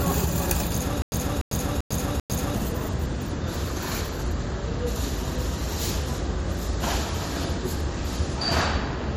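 Between 1.02 and 2.55 s this everyday-sound recording shows a stutter with silent gaps: a 0.29 s fragment repeats four times, each followed by 0.1 s of dead digital silence. That even gap sets it apart from a seamless loop and points to a playback stall as the likely cause.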